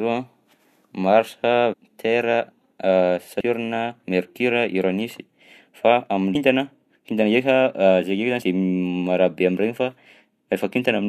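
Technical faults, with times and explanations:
1.72–1.74 s, 3.39–3.41 s, 6.34 s and 8.41 s: damaged data in a compressed stream. At each point, some bytes of the encoded speech were corrupted, so the decoder misread or rejected those frames, lost sync and hunted for the next valid frame header before resuming. Each event is a brief chirp or blip of garbled sound, about 22 ms at the first two times and about 12–13 ms at the last two.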